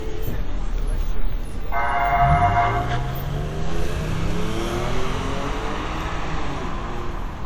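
Generation loss runs right through: the sound is swirly, hollow and smeared, with blurred attacks, likely from around seven WMA passes at something like 96 kbit/s.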